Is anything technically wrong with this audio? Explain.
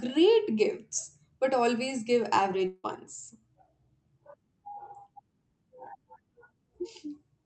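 Yes, there's a gap in the speech from 2.67 to 2.86 s. It's likely a long network dropout: packets stopped arriving, so the receiver stretched the last sound into a fading buzz for about 160 ms, then about 30 ms of silence, before the speech resumes with that piece missing.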